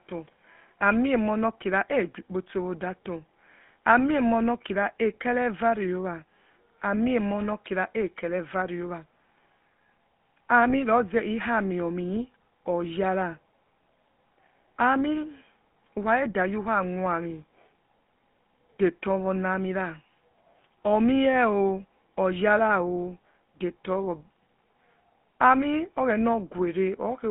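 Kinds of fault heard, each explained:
GSM full-rate codec: The speech has passed through the original GSM coder, which rebuilds the voice from a vocal-tract filter excited by a sparse, regularly spaced pulse train. That gives the plainly audible buzzy, gravelly roughness heard throughout, consistent with a 13 kbit/s full-rate stream. On a spectrogram, energy sits between 150 Hz and 3.5 kHz with nothing above. Harmonics look smeared and grainy rather than clean, and the waveform shows a coarse, pulse-driven texture.
lost GSM frames: Around 10.70 to 10.73 s, the decoder lost a stretch of the signal. It filled the gap by repeating the last good frame's settings, which matches one missing 20 ms frame. The held sound has a brief rough, metallic ring instead of the natural continuation. On a spectrogram, the previous frame's pattern appears copied across the gap. On the waveform, that segment shows a short repeated chunk.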